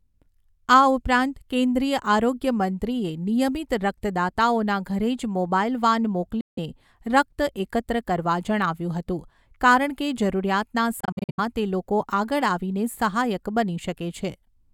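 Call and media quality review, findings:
Bluetooth dropout, 6.41–6.59 s, after "મોબાઈલ વાન", before "રક્ત એકત્ર કરવા જણાવ્યું". Likely cause: wireless link to headphones, packets missing their playout deadline and discarded. Output silent about 0.16 s; speech resumes further on, as if it had kept playing.

Bluetooth dropout, 11.00–11.40 s, after "હતું કારણ કે જરૂરિયાતના", before "તે લોકો આગળ આવીને". Likely same link, losses scattered: about 0.23 s missing across 0.37 s, longest gap 70 ms. Choppy, broken-up sound, not one clean gap.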